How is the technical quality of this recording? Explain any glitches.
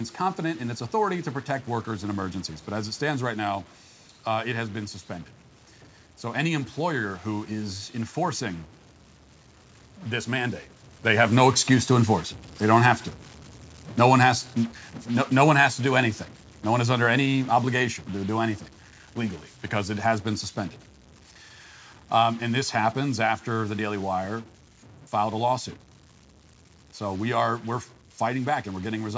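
Two faults affect the quality of this speech recording: a persistent distortion and a gradual loss of level from about eleven seconds on.

Stuck bit: Throughout, a distortion rides on the speech and fills the pauses with noise. The likely cause is a data bit stuck at one value. On a spectrogram this appears as broadband hash even in gaps, and the waveform looks jagged.

Automatic gain falling: From 11.05 s to 28.5 s, just after "this mandate", the automatic gain control steadily lowers the level by about 11 dB, so the speech and its room background sink together. The waveform envelope tapers visibly.

This is separate from the talker shifting position around ten seconds, a normal change at the microphone.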